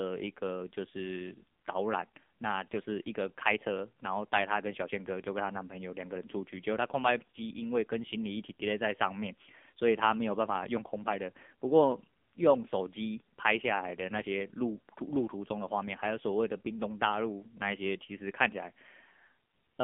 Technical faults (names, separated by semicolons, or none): AMR narrowband mobile codec